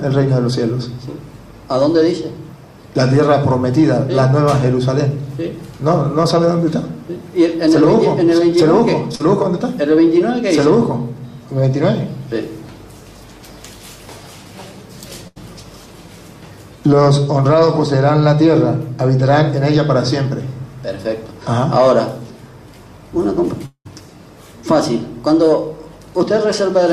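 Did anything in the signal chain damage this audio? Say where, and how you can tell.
Yes, and the damage is on the network side. At 9.15 to 9.21 s there is a brief smear where the sound seems to hang on itself for a moment before the real signal blends back in. This is short concealed packet loss: about 40 ms of audio never reached the decoder in time, and the receiver covered the hole by extending the last sound for about 41 ms, so a short detail there can be lost.

At 15.27 to 15.38 s the gap is longer. The sound freezes into a held, fading tail, and the audio then picks up slightly further along. That points to a burst of packet loss of about 80 ms. The receiver synthesised about 83 ms by continuing the last sound while turning it down, and the stretch in between is simply gone.

The worst event runs from 23.66 to 23.87 s. A sustained continuation of the last sound fades out, and the roughly 190 ms of filled audio ends in about 80 ms of near silence before the audio returns further on, with about 200 ms of it missing. 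The cause is likely a long network dropout. Nothing arrived during that stretch, so concealment ran until it had faded away, leaving a silent hole before playback resumed.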